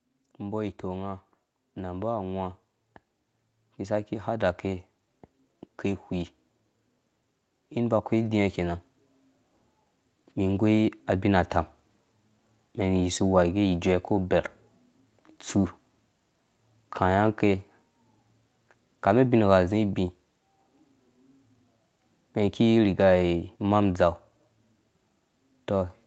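From 0.39 s to 11.43 s the speech and its background get steadily louder together: automatic gain rising. The gain control judged the input too quiet and kept raising its gain, ending up about 11 dB higher, so the noise floor climbs along with the voice instead of staying put. On a waveform the envelope widens as a slow ramp over those eleven seconds. A spectrogram brightens evenly across the band, which stops at 8 kHz in this call audio.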